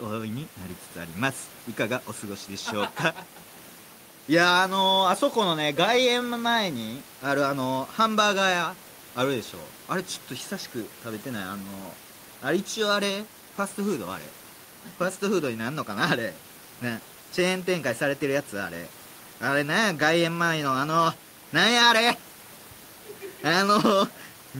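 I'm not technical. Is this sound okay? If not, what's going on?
Yes, no faults here; the faint background noise is ordinary room noise picked up by the microphone, sitting well below the speech.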